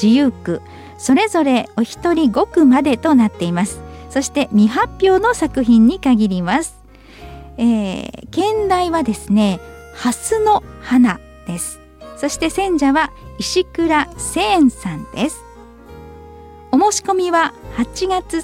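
No technical faults can be heard anywhere in the audio.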